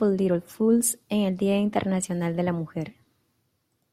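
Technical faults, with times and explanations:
Nothing stood out on listening to this speech recording.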